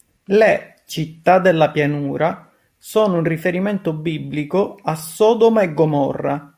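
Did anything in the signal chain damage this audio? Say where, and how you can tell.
No, nothing along the chain has left a mark I can hear on this speech; it comes through steady and intact the whole way.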